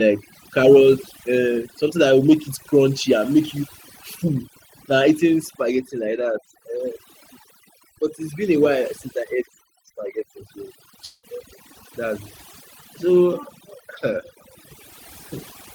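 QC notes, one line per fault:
throughout, overdone noise removal: the noise reduction is set far too strong, pulling single frequency bands down or out whenever they sit near its noise estimate, along with the quiet parts of the speech. The background drops and breaks up into twinkling specks.
11.05 to 11.26 s, long network dropout: audio likely stopped arriving, and about 180 ms was never played. The receiver stretched the last sound for about 174 ms as a fading buzz or hiss, then about 10 ms of silence before the audio resumes without the lost part.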